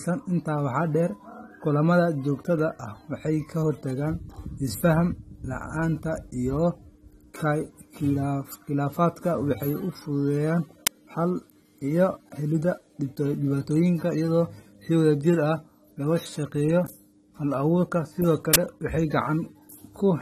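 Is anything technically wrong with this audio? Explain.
Yes. The speech carries coding damage throughout, and two bursts of digital noise break in.

The whole clip sounds dull and smeared. Nothing is present above 15.2 kHz. Sibilants have a fizzy, warbling edge. This is likely AAC compression at a low bitrate, around 32 kbps, which fits AAC-LC. The encoder runs short of bits, so it cuts the top of the spectrum and quantises the rest coarsely. Detail in the upper bands turns watery.

An uninitialised buffer plays at 10.87 s, just after "u fudhudeyan". It is a very short, loud crack of noise. Its length fits a 256-sample block of about 5.8 ms. A second one runs from 18.54 to 18.56 s, about 23 ms long, which fits a 1024-sample block. In each case a buffer went out before real audio was written into it. Leftover memory was played as samples, giving a harsh burst unrelated to the speech.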